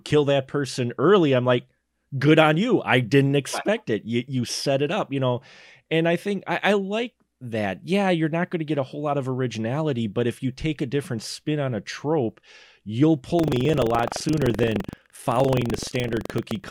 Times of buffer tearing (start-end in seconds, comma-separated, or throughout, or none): 13.35-16.70